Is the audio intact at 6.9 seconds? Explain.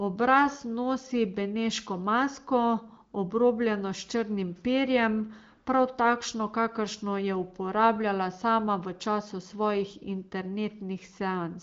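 Yes, the audio is intact at 6.9 seconds, with the speech passing cleanly through the AMR wideband (HD Voice) codec at 18.25 kbit/s and no fault at that moment.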